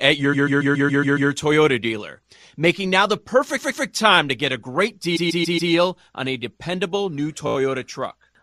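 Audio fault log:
0.33–7.56 s, repeated frames: the same short chunk of speech replays, giving a stutter. A 139 ms block plays 7 extra times at 0.33–1.30 s and twice more at 3.57–3.85 s, after "dealer making now the". A 129 ms block plays 4 extra times at 5.15–5.71 s, before "on a dependable new". A 17 ms block plays 5 extra times at 7.47–7.56 s, after "on a dependable new". Compressed frames were written or sent more than once, and the replays add about 1.9 s.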